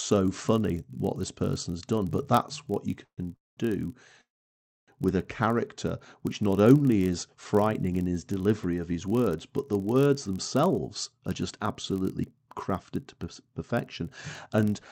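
Throughout the speech runs a buzz at about 43.1 Hz, a block size mismatch (padded). Each block is written short and zero-filled to suit a 1024-sample read, so the audio plays about 0.1% slow at normal pitch. A waveform shows regularly spaced tiny gaps, and a spectrogram shows vertical striping at that rate.

Three call audio freezes follow, most likely from packets arriving late and the jitter buffer running dry. The first runs from 3.04 to 3.20 s, right after "that's what you". The second runs from 3.36 to 3.59 s, and the third from 4.21 to 4.90 s, ending just before "with a". Each stretches the last sound into a fading buzz or hiss and then falls silent for about 80, 190 and 630 ms, with nothing lost. On a waveform these show as decaying tails into flat lines, and on a spectrogram as smeared bands going blank.

From 10.16 s, after "his words but the", to the end, a jitter buffer speed-up trims pitch periods repeatedly, so delivery sounds hurried at 111% speed with unchanged pitch. 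A spectrogram shows the syllables compressed in time, with tiny splice seams and harmonics still at the same height.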